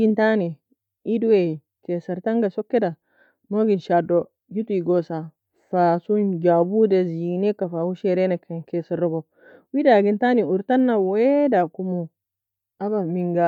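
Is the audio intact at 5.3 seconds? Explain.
Yes, the speech at 5.3 seconds is intact, with no audible fault at that point.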